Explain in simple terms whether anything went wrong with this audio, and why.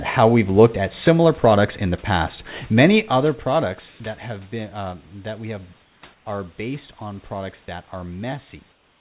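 Comfort noise in place of the background shows up at 3.88–4.0 s, at 5.82–6.02 s and 6.14–6.26 s (between "uh that we have" and "are based on products"), and at 8.72 s to the end. The real room sound is briefly replaced by flat, featureless hiss. This likely happens because the sender pauses during quiet moments and the receiver fills in fake noise.

Sound dropped by the voice detector happens at 7.66–7.68 s, just after "are based on products". A tiny sliver of sound is swapped for that same hiss, likely because the detector mistook it for background.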